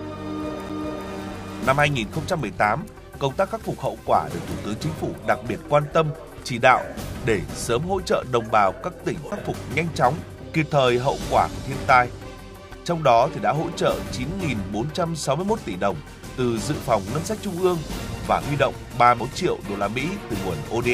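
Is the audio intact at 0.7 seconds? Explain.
No. A CD skip hits at 0.69 s. A knock or a flaw on the disc threw the laser onto a different turn of the spiral track. The player muted for a split second, only a few milliseconds, and then resumed reading from the wrong place. You hear a short tick followed by an abrupt jump in the audio, as continuity breaks and playback carries on from a point displaced by whole disc revolutions.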